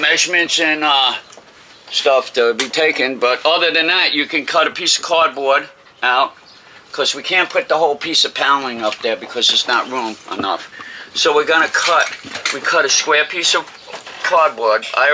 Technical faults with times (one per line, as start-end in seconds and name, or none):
none